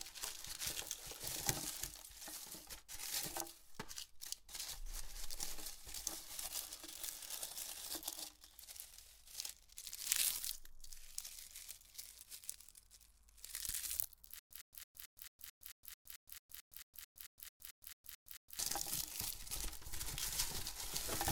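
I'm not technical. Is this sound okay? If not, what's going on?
No. From 14.39 to 18.59 s there's a stutter with silent gaps. The same brief snippet repeats every 0.22 s, with dead silence between. The player likely stalled, and that stretch is lost.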